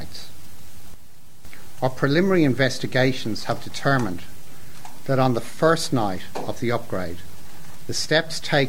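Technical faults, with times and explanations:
0.94–1.45 s, sudden gain jump: sound and background noise drop together by about 6 dB, then recover, likely from a gain change applied instantly without a ramp.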